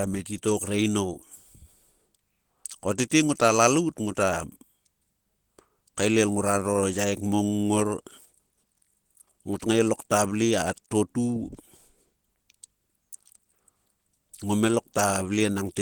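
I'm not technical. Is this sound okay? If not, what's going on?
No. The speech carries a muffled, hoarse texture the whole way through, most likely from Opus compression. To save data, the encoder switches to a mode built for speech, which rebuilds parts of the sound approximately instead of keeping them exactly.

At about 2.98 s there is also a brief pre-echo. The compression handles sound in short chunks and spreads its errors across each chunk, so a hiss of about 10 ms arrives just before a sharp onset and softens its edge.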